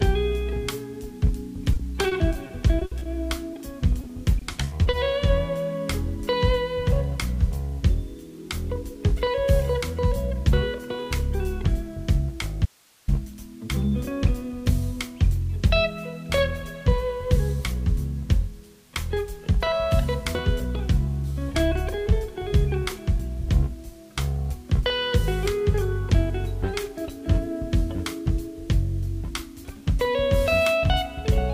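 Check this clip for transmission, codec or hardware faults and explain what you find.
Three kinds of transmission fault appear, all in the first half of the clip.

Repeated packet loss (robotic sound) occurs from 1.73 to 3.07 s, with eight gaps totalling 200 ms (the longest 60 ms), and again from 4.01 to 4.95 s, with seven gaps totalling 140 ms. Each gap is patched by extending the preceding sound, so about 15% of each stretch is synthetic. This gives a choppy texture with pieces missing. On a spectrogram it shows as repeated smeared, overly steady blocks.

A short concealed packet loss falls at 3.53–3.57 s, where 20 ms never arrived and was filled from the prior sound. It is heard as a brief smear or wobble, and appears as a tiny flattened patch in the waveform.

An audio dropout to a faint residue runs from 12.66 to 13.08 s, about 424 ms in which the sound cuts abruptly to hiss roughly 35 dB below normal level. 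This was likely caused by the signal being lost upstream while the later path stayed live. It appears as a sharp-edged, near-empty gap in the waveform.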